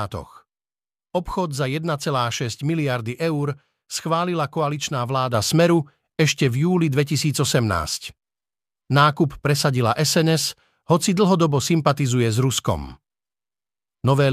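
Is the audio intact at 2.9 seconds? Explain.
Yes, the speech at 2.9 seconds plays through intact, with no audible fault at that moment.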